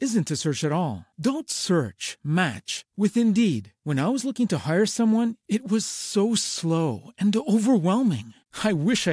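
Nothing in the recording stands out as a technical fault at any point, so there's really nothing to flag here.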